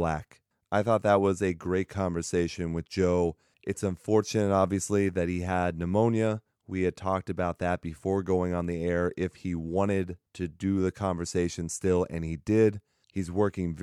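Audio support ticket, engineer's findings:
No audible faults found in the speech recording. No component implicated; no further action from the audio side.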